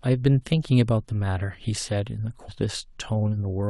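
At 2.47 s, damaged data in the compressed stream makes the decoder lose sync, giving a brief glitch; the spectrogram shows a thin broadband smear and the waveform a jump.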